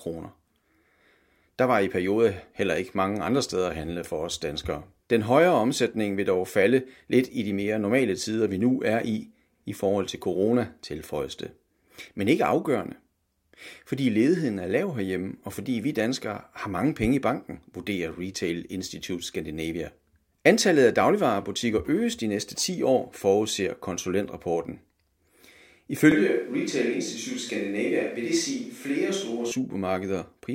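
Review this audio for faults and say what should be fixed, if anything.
From 26.12 to 29.52 s the close mic likely dropped out. The resulting switch to a distant microphone makes the speech abruptly hollow, roomy and thin in the bass.

Monitor the close microphone's feed and record a backup close-mic track, so that a failed channel can be replaced rather than falling back to the distant source.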